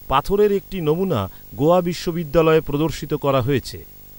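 A speech recording carries video or display buzz from start to finish: a rasping 50 Hz buzz at the picture's field rate, with hash above it and a very high whine at 15.6 kHz, the line rate. This sits well below the speech. A screen or video cable coupling into the audio path is the cause. Mains hum would also sit at 50 Hz, but it is smoother and lacks both the hash and that 15.6 kHz tone.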